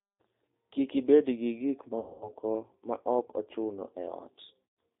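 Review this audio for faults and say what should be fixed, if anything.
The whole clip sounds narrow, slightly rough and synthetic, with nothing above 4 kHz. This is the G.729 codec at work: it discards the waveform and rebuilds speech from a vocal tract filter, a pitch predictor and a few pulses per 5 ms subframe, and the plainly audible damage fits its 8 kbit/s rate. To prevent it, carry the call on a wideband or higher-rate codec such as G.722 or Opus.

From 2.00 to 2.29 s, between "ibed gi gik" and "ma ok ochuno", the speech smears into a buzzy tone or coloured noise that weakens and stays distorted into the following syllables. At 4.70 to 4.73 s a shorter, similar dropout appears. This is VoIP packet loss concealed by the speech codec. About 210 ms and 120 ms of audio went missing, and the decoder stretched its last pitch and filter settings while lowering the gain. Because each frame builds on the previous one, the distortion lingers after packets resume. 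To prevent it, improve network reliability and add forward error correction or redundancy with a suitably sized jitter buffer.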